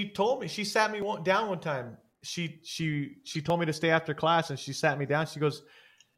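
Speech, with two skips, at 1.02 s and 3.5 s, where the sound jumps forward by about 20 ms and the two sides butt together with no gap of silence. The even 2.5 s spacing between them points to audio missing between chunks, likely from a recorder or processor that works in 2.5 s blocks and drops a brief stretch each time it closes one block and opens the next.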